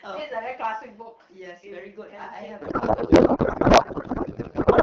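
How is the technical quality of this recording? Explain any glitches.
The recording has one serious glitch that runs from partway through to the end.

Codec payload misread, from 2.61 s to the end: the speech, carried over AMR wideband with light coding damage that fits a rate around 12.65 kbit/s, suddenly turns to garbled noise and warble that barely tracks the talking. The frames were packed in octet-aligned form but are being unpacked as bandwidth-efficient, so every field sits at the wrong bit position and the decoder synthesizes nonsense from valid-looking data.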